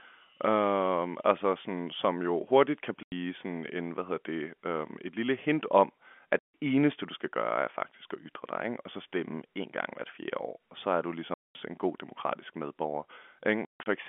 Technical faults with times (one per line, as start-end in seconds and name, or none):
3.03-3.12 packet loss filled with silence
6.39-6.54 packet loss filled with silence
11.34-11.55 packet loss filled with silence
13.65-13.86 packet loss filled with silence